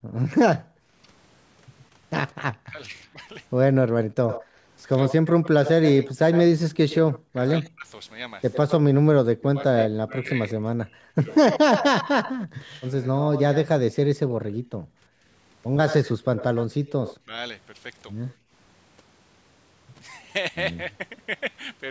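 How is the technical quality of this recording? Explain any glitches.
The recording has clear call-path problems: the voice is repeatedly squashed, a delayed copy of it leaks back, and the room sound briefly drops out.

Speech suppressed in double talk runs from 0.24 to 12.52 s, then again from 14.17 to 15.25 s and 16.77 to 17.33 s. The voice dips or breaks into pieces, by about 40 dB at worst in the first stretch and about 30 dB in the later two. Across the first stretch that adds up to roughly four seconds of suppressed speech, and each later stretch loses about a fifth of a second. This is likely an echo canceller that could not tell the near talker from its loudspeaker echo while both sides were active, so it turned everything down. On a waveform these show as sudden notches in the speech envelope. On a spectrogram the harmonics fade or vanish in vertical gaps.

Echo leak is heard from 4.29 to 13.68 s and from 15.87 to 18.34 s. 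A second copy of the voice trails the original, 99 ms behind in the first stretch and 80 ms behind in the second. It sits roughly 10 dB and then 15 dB below the direct speech. The leak is likely the far end's loudspeaker being picked up by its microphone and not fully cancelled. On a spectrogram syllable patterns reappear, weaker and shifted slightly later in time. The waveform shows small smeared tails after speech.

Background gated by the echo canceller occurs at 18.37 to 18.51 s. The room tone drops about 24 dB for roughly 150 ms and then comes straight back. The canceller clamped the microphone hard while the loudspeaker was playing, then released it. On a waveform the noise floor briefly collapses to near-flat. On a spectrogram a short, dark vertical band cuts across the background noise.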